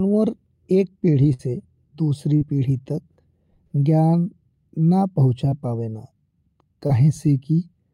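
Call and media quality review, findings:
Burst of packet loss, 1.33–1.41 s: about 60 ms never arrived. The jitter buffer/decoder concealment stretched the last sound for roughly 55 ms and faded it, so you get a short held buzz or fading hiss and then a jump ahead with a chunk gone.

Short concealed packet loss at 2.37–2.43 s (40 ms), 5.49–5.53 s (20 ms) and 6.87–6.91 s (20 ms): brief smear or wobble at each spot. The decoder's loss concealment bridged each hole by extending the prior sound, then crossfaded back into real audio.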